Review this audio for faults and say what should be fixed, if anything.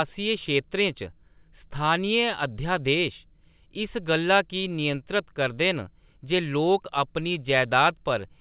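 No faults turn up in this audio, so nothing needs to be fixed.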